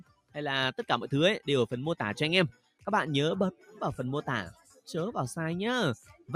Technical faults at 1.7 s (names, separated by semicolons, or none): noise suppressor applied to music or sounds